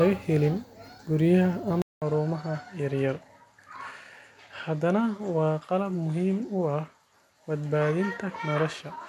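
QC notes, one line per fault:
1.82–9.09 s input switched to a poorer device: 200 ms gap, then speech about 5 dB quieter, nothing above 12.4 kHz, faint new background noise; likely a narrower-band microphone.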